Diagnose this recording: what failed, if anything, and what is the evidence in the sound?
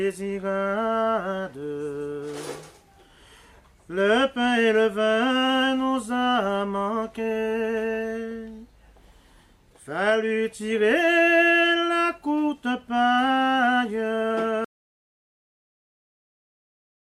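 At 14.65 s the sound stops dead and stays silent right through to the end, about 2.5 s with no room tone at all. That's an audio dropout to silence: the input most likely disconnected or muted upstream while the recorder kept writing zeros.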